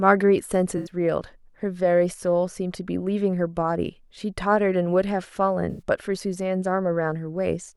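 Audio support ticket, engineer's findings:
AAC frame loss with concealment at 0.77–0.89 s and 5.70–5.81 s. Smeared, phasey patches. About 85 ms missing each, consistent with four AAC frames rebuilt by the decoder from earlier spectrum.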